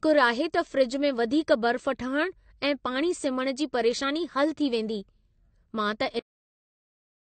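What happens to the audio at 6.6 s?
Nothing is heard at 6.6 s: the speech breaks off abruptly at 6.19 s and the clip stays in digital silence to the end, with no decay. This is a cut-off end, where the final stretch of audio was never written or played out, so the sound stops mid-utterance.

That moment sits inside a dull, smeared sound that runs through the whole clip, with nothing above 8.5 kHz and plainly audible codec damage. This is AAC compression, likely AAC-LC at a low bitrate, consistent with about 32 kbps, where the encoder lowers its cut-off and coarsely quantises what remains.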